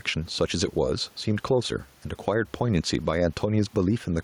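Throughout the speech, the gain swings by around 5 dB, leaving the delivery squashed and flat. This gain pumping likely comes from input gain set far too high, with a fast limiter or compressor clamping down on each peak. The room noise itself sits about 38 dB below the speech.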